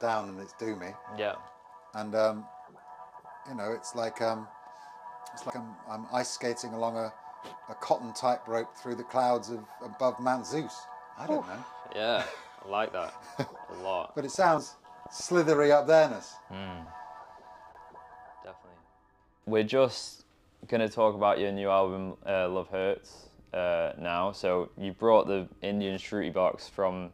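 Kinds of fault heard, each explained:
Dropped buffer (overrun): the sound jumps forward at 5.5, 9.44, 14.58 and 16.86 s, likely from samples overwritten before collection, losing roughly 20 to 70 ms.
Train of clicks: about ten similar pops at an uneven pace, near six per second, tick over the sound from 14.35 to 15.70 s, likely from interference.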